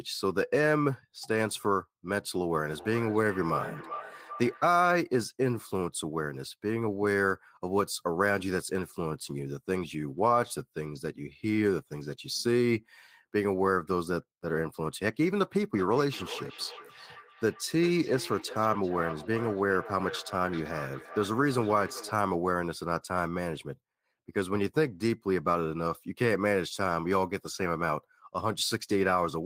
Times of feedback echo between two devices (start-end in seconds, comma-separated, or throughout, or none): 2.77-4.70, 15.76-22.20